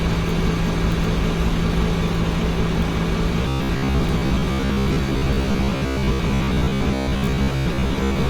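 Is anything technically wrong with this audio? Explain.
Yes. Robotic sound from repeated short buffers, 3.42 to 8.29 s: a rigid 66.8 Hz buzz, likely from roughly 15 ms chunks replayed while about half the real audio was skipped.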